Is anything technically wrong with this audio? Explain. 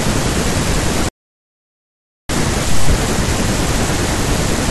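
Yes. A playback stall runs from 1.09 s to 2.29 s, where the speech cuts out in mid-flow and the output falls completely silent for about 1.2 seconds before picking up again. The likely cause is the player running short of buffered data, or its audio thread being held up, so nothing was delivered to the output until it recovered. The gap is abrupt on both sides, breaking the natural rhythm of the talking.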